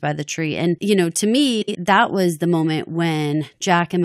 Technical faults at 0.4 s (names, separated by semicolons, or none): none